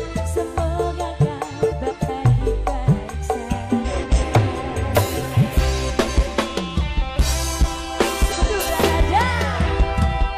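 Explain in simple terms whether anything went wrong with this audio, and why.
Something did go wrong. Four short stretches play as frames out of order: 1.71–2.10 s, 3.84–4.24 s, 5.89–6.28 s and 8.28–8.69 s. In each, two pieces of about 0.19 s swapped places. That gives a garbled flutter. No sound goes missing.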